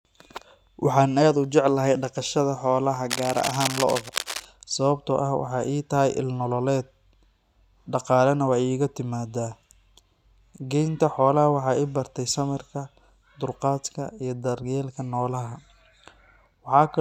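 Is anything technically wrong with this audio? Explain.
Yes. From 3.10 to 4.45 s there is cable scratch noise. A worn cable or connector being moved likely caused rapid resistance changes, adding scratchy, uneven bursts roughly 10 dB under the speech.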